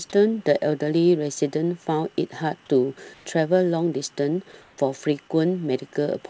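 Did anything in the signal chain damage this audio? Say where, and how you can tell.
Yes, in the call processing. Comfort noise in place of the background shows up at 3.14 to 3.26 s and 4.62 to 4.78 s. The quiet background, about 36 dB below the loud parts, turns into flat, detail-free hiss at the same level, likely discontinuous transmission filling pauses with synthetic noise.

There's also sound dropped by the voice detector at 4.52 to 4.54 s, where about 10 ms of the speech itself gives way to that steady noise, likely the detector misreading a quiet tail as background. The G.722 path itself, topping out at 8 kHz, isn't the culprit.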